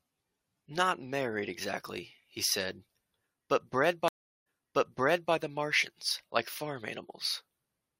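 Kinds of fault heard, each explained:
Stream reconnect: right after "'but bred", at about 4.08 s, the speech drops into roughly 0.38 s of silence, then comes back softly and repeats material from about 0.88 s earlier, so the listener hears a short stretch again. The disturbance is over by about 5.33 s. The connection broke, the player waited, reconnected and started a fresh decoder mid-stream, and the server resent a burst from an earlier point.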